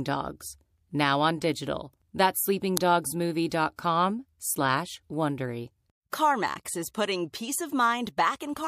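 At 2.77 s, an uninitialised buffer reached the output before any audio had been written to it, so leftover memory was played as samples. In this speech clip, that produces a sudden, loud click of digital noise lasting under a millisecond, which fits a 32-sample block.

At 3.49, 3.76 and 6.10 s, pre-echo appears. The transform codec spread each block's quantisation noise across its whole 36 ms window, and it appears never to have switched to short blocks. Hiss rises about 17, 18 and 23 dB over 22, 25 and 31 ms before each attack, which sounds softened and smeared.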